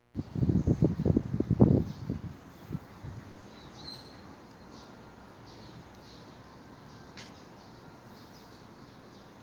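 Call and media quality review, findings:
Short stall from a late packet, 3.31–3.38 s: sound held about 50 ms while the jitter buffer sat empty, then resumed from the same point with nothing lost and playout running 50 ms later.

Short concealed packet loss, 3.40–3.44 s: 20 ms never reached the decoder and was filled by extending the preceding sound, heard as a brief smear before blending back.

Skip at 4.84 s: about 50 ms of sound gone, with both sides butted together without silence. Likely audio missing between chunks at a recorder or processor boundary, consistent with 2.5 s chunking.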